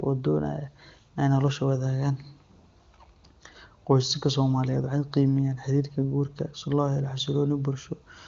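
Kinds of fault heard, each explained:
No faults heard.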